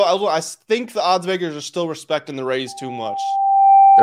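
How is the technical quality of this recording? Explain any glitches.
The recording has one real problem: loudspeaker feedback squeal taking over the tail end of the speech. It starts right after "are still respecting the", at about 2.67 s, and runs to the end at about 4.03 s. The mic is hearing its own loudspeaker, and at 787 Hz the loop gain tops one, so that frequency feeds itself. You hear a single tone swelling over roughly a second until it sits about 10 dB above the voice.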